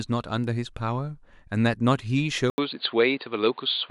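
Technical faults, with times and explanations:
2.5 to 3.9 s, input switched to a poorer device: after an 80 ms silence, the speech turns dull and narrow, with nothing above 4.7 kHz. A new background noise sits well below the voice. The level stays about the same. The likely cause is a change to a band-limited microphone.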